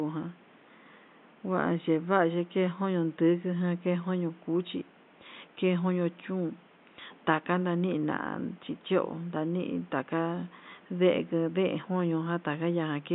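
Speech with no technical faults.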